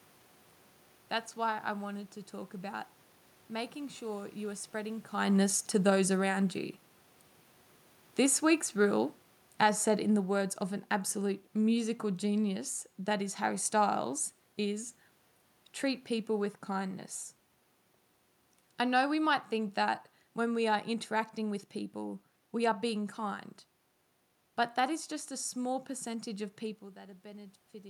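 From 5.84 s to 14.08 s the automatic gain falling is audible: the gain control judged the input too loud or its background noise too strong and pulled its gain down gradually, by about 7 dB over those eight seconds. The speech starts loud and sinks steadily, and the room noise underneath drops with it, which separates this from the talker moving, heard around 5 s and again near 26.5 s, where only the voice level changes.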